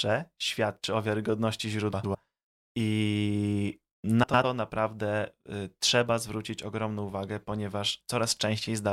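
At 1.93 to 2.15 s and again at 4.23 to 4.45 s the speech breaks into a brief garbled flutter. These are frames out of order: two adjacent chunks of roughly 105 ms each were decoded in swapped sequence, which fits runs of four frames apiece. The later half plays before the earlier, so the sound jumps back and forth across three abrupt joins, yet no time goes missing.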